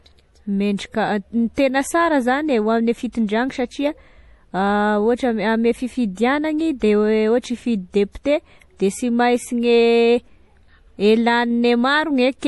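A speech recording whose top end stops dead at about 11.5 kHz, with a watery, swirling quality across the whole clip and metallic chirps that flicker in and out, the codec damage plainly audible. That hard ceiling and the unstable high detail point to MP3 compression, likely at a low bitrate around 48 kbps, where the encoder drops the treble and lets weak frequency components switch on and off between frames. A simple low-pass filter would leave the remaining band steady, without this swirling. At 3.12 to 3.15 s there is pre-echo: a short hiss about 22 ms long runs just ahead of a sharp attack, which itself sounds softened. It comes from the codec spreading the coding noise sized for the loud onset back across the quiet moment before it in the same block. Unlike a click or reverb tail, the hiss comes before the event, not after it.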